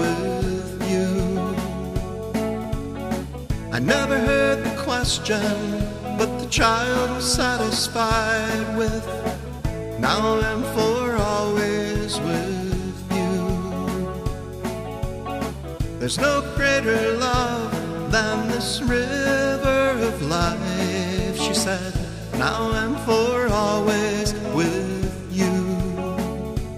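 From 2.64 s to 10.63 s there are periodic USB or driver dropouts: a tick or pop every 2.0 s, about five in all. Each time, something briefly stalls the audio path and around a millisecond of audio is skipped, so the waveform jumps straight across the gap. What separates this from random clicks or network packet loss is the exact, even spacing, and the ticks sound only while there is signal.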